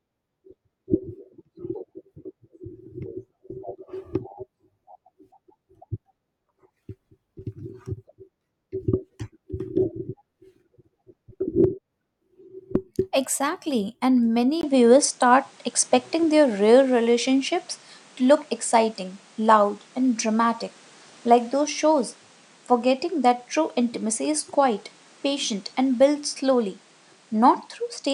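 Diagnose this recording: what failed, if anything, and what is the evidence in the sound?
Input switched to a poorer device at 14.61 s, likely at the driver stage: after a 20 ms gap, speech stops above 10.5 kHz and gains new background noise.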